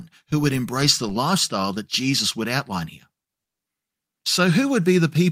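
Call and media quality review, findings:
Call audio freeze, 3.43–3.62 s, right after "would outline here": speech halts for about 160 ms of silence, then resumes where it stopped, nothing lost, everything after delayed 160 ms. Likely jitter buffer running empty while packets were held up in transit.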